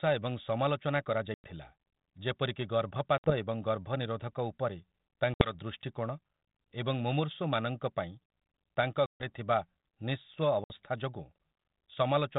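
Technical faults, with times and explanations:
1.34, 3.18, 5.34, 9.06 and 10.64 s, packet loss on an ADPCM call: several packets of the 32 kbit/s G.726 stream went missing, leaving silences of 100, 60, 60, 140 and 60 ms. The decoder's predictor and step size lost track of the sender's, so speech resumes slightly distorted until it resynchronises.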